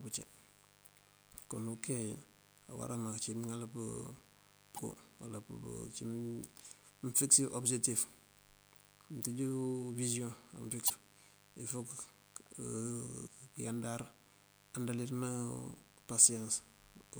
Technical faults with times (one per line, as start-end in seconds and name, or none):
0.00-17.19 mains buzz
4.74-4.79 damaged data in a compressed stream
10.86-10.90 damaged data in a compressed stream
13.23-13.28 damaged data in a compressed stream